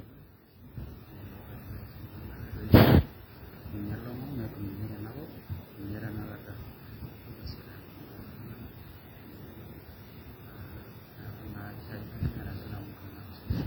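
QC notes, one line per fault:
Throughout: WMA compression, likely from a simple transform encoder running at a low bitrate, which fits a WMA 1 stream near 32 kbps. The long transform blocks smear quantisation noise over tens of milliseconds around each sound, and weak spectral lines are zeroed out, so the speech comes across ringing and washy. The codec damage is heavy, with a hiss that swells and fades along with the signal as it changes.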